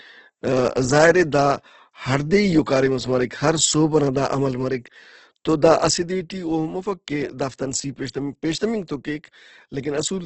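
From the start, the speech carries the marks of likely Opus compression at a very low rate, which fits something near 12 kbps. In its music-oriented coding mode the encoder keeps each band's overall energy but lacks the bits for the detail, so it fills bands with folded or noise-like content. The result is heavily damaged: the voice sounds rough, grainy and hissy rather than swirly, and nothing remains above 8.1 kHz, giving a dull, wideband-only top.

At 5.98 s, right after "تو دا", one channel drops out and stays gone until the end of the clip, likely because one side of the stereo feed was lost. Once the two sides are summed to mono, sound shared by both channels falls abruptly by about 6 dB, so the speech suddenly becomes noticeably quieter, and anything carried only by the missing channel vanishes entirely.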